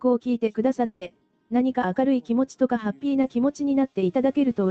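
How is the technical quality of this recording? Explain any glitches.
The recording has two network glitches. It sounds like it passed through a call codec, with the top end stopping at about 8 kHz, which fits Opus at a modest bitrate such as 24 kbps.

From 0.85 to 1.03 s there is a long network dropout, likely from a stall in incoming packets. With nothing arriving, the receiver keeps extending the last sound for about 0.16 s. It becomes a smeared buzz or hiss rather than real audio, and the audio resumes afterwards without that stretch. Unlike a brief concealed loss, the fill lasts long enough to be heard as a fading buzz or hiss rather than a momentary blip.

Between 3.21 and 3.25 s there is a short concealed packet loss. About 20 ms of data failed to reach the decoder in time, so the receiver bridged the gap by continuing the preceding sound, as a pitch or as shaped noise, and then blended back into the real signal. 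It is heard as a quick smear or wobble. Compared with the dropout, it is far shorter and the real audio returns almost at once.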